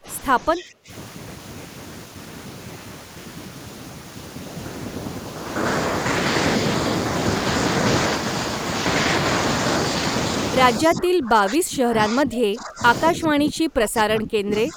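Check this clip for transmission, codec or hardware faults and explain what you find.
Two faults are present in this speech clip: speech suppressed in double talk, and a brief echo leak.

Speech suppressed in double talk occurs at 0.00–0.07 s, 0.54–0.91 s, 10.87–12.83 s and 13.11 s to the end. An echo canceller likely mistook simultaneous talk for loudspeaker echo and attenuated everything. The voice sinks by about 20 dB early on and about 25 dB in the later stretches, fading and breaking up.

An echo leak appears at 0.57–0.64 s. Residual loudspeaker pickup likely slipped past the far end's echo canceller and was returned. It arrives as a faint delayed copy of the voice, 215 ms behind and about 25 dB below it, a short scrap.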